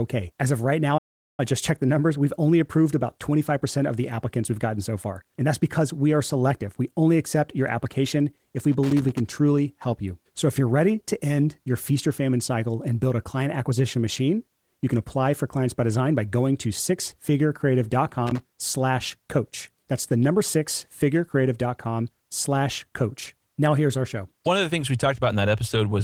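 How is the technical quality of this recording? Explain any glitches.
The recording has two kinds of glitch: a brief dropout near the start and two bursts of crackle later on.

From 0.97 to 1.40 s the speech cuts out to silence for about 405 ms. This is a playback stall, likely caused by the player's buffer running dry or its thread being held up. Nothing reaches the output until it recovers, so the speech simply stops mid-flow and then resumes.

From 8.72 to 9.20 s, and again from 18.27 to 18.42 s, there is loose connector crackle. A worn or dirty contact keeps breaking and remaking the circuit, chopping the signal into rapid fragments. It comes through as an irregular, scratchy burst over the speech.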